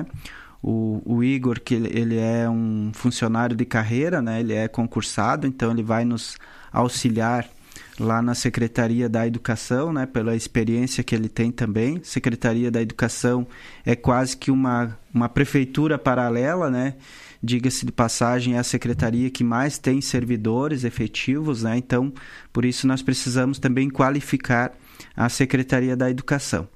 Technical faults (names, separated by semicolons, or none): none